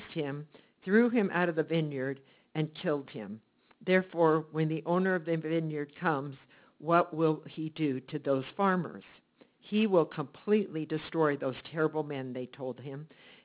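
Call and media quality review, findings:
Aliasing throughout the clip. Gritty, metallic false tones that don't match the source pitches; the spectrum runs hard up to a 4 kHz edge. Probable component: sample-rate converter lacking an anti-alias filter, consistent with a downsample from 44.1 kHz to 8 kHz. Content above 4 kHz folds back below it as unrelated frequencies, roughly 25 dB under the wanted signal.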